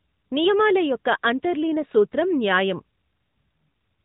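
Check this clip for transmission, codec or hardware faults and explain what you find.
One fault runs through the whole speech clip: AMR narrowband mobile codec damage. Nothing above 3.8 kHz survives. The codec rebuilds the voice from a vocal-tract model fed by sparse pulses. Artefacts are plainly audible, giving a buzzy, synthetic edge that fits a mid rate near 10.2 kbps.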